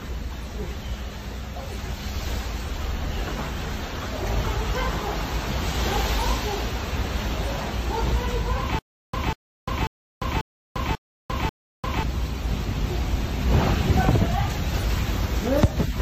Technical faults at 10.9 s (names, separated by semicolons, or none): stutter with silent gaps